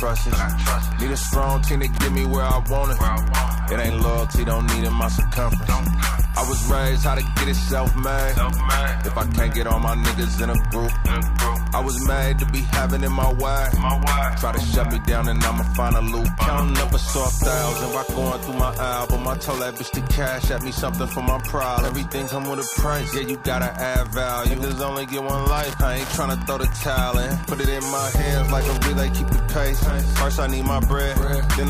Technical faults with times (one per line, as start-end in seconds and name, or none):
0.00-31.70 Wi-Fi interference